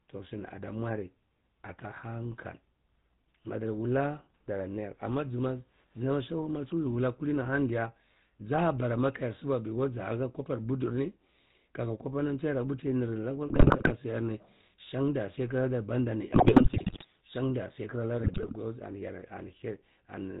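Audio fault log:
Throughout: GSM full-rate codec. The whole clip has that unmistakable buzzy, gravelly edge, and the top end stops dead around 4 kHz. The codec rebuilds the speech from a vocal-tract filter fed by a sparse, evenly spaced pulse train, so the fine detail of the excitation gets thrown away and comes back as rasp. The damage is plainly audible here, and the character fits a 13 kbps full-rate stream.
13.48–13.92 s, 16.32–17.05 s, 18.18–18.59 s: GSM bit errors. In these three bursts the speech falls apart into squawks, pops and gargling. Corrupted bits are reaching the decoder, and once the filter, pitch or gain parameters are wrong, each affected frame gets a warped spectrum or a sudden jump in level. The middle burst is the longest and roughest, which points to a bit error rate of around 5 percent. The last burst is the mildest, suggesting nearer 2 to 3 percent.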